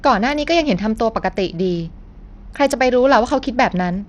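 Throughout the speech, the treble flickers in and out and a gritty, aliased noise rides on the sound, likely from Bluetooth SBC compression at a small bit pool near 80 kbps. Unlike a steady low-pass, the top bands starve intermittently, leaving coarse graininess rather than smooth dullness.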